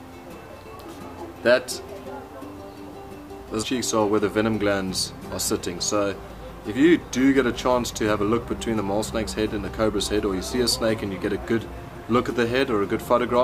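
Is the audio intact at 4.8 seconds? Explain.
Yes, the audio at 4.8 s is intact, with no dropout, click, distortion or other fault audible at that moment.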